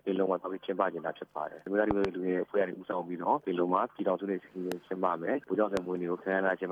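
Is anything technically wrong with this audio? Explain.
Yes. Loud pops occur from 1.91 to 2.07 s as a close pair, then at 4.72 to 4.74 s and 5.77 to 5.79 s, peaking about 15 to 20 dB above the sound. A voltage transient, likely from a plug, switch or static, punches through as sharp thumps while the audio continues underneath.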